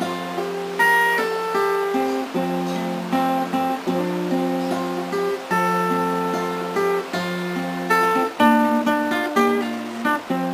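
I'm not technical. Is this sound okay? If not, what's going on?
No. From 7.83 s onward, software likely squeezed the audio to fit, making a time-stretched section 1.63 times faster. The pace suddenly rushes while the pitch stays the same.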